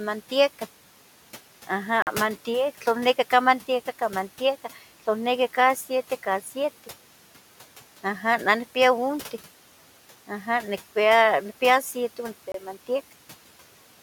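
Bluetooth stalls at 2.02 to 2.07 s and 12.52 to 12.54 s: the speech cuts to silence for 47 ms, then 25 ms, before resuming. This is likely caused by interference delaying wireless packets, letting the headphone buffer run dry until resent packets arrived.

Speech cut by the noise suppressor at 6.43 to 6.53 s: for about a tenth of a second the suppressor mistook part of the speech for background and pulled it down by up to about 8 dB. That stretch sounds swallowed and faint against room noise about 22 dB below the speech.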